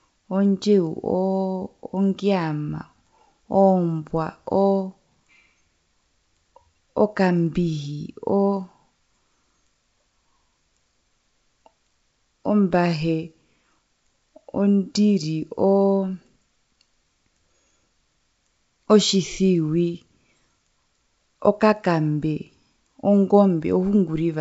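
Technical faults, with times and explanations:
No technical faults can be heard in the speech. It carries the sound of G.722 wideband telephone coding at 64 kbit/s, with the audio band ending at about 7.7 kHz.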